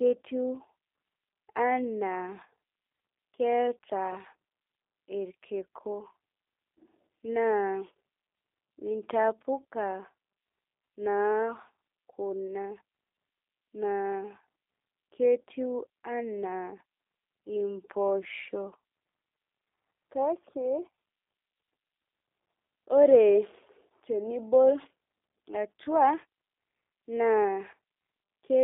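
From start to end the speech carries G.729 codec damage, plainly audible. Sound above about 3.6 kHz and below 300 Hz is missing, and the rebuilt pulse-excited voice sounds rough and synthetic, which fits an 8 kbit/s G.729A link.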